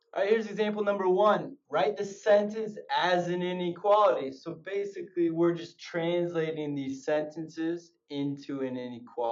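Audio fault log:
2.00–9.32 s, time-stretched section: from 2.00 s to the end the pace drops abruptly to about 0.7 times the original speed while the pitch stays where it was. The slowed material drags. This is likely software stretching the audio to a longer length, holding pitch by repeating short overlapping pieces.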